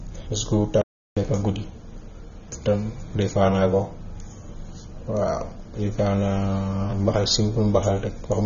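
From the start, the speech is dull and smeared, with plainly audible coding damage. Nothing is heard above 6.9 kHz. Sibilants lose their edge. This is likely AAC compression, AAC-LC in particular, at a bitrate low enough to fit roughly 24 kbps. The encoder quantises each frame's spectrum against a hearing model. With few bits to spend, it drops the top band and leaves gaps or noise-filled patches below the cut-off.

At 0.81 s the speech stops dead. Silence holds until 1.17 s, about 0.35 s in all. Then the speech carries on. This is a playback stall. The player likely had nothing to output, either because its data ran out or because its thread was held up. The gap comes mid-flow, with no fade, so it sounds like a sudden hole rather than a pause in the speech.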